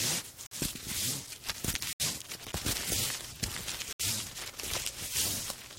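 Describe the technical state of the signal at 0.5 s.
At 0.5 s the signal drops to silence from 0.47 to 0.53 s, a corrupt frame muted: the decoder rejected damaged frames, and the gap fits two lost frames.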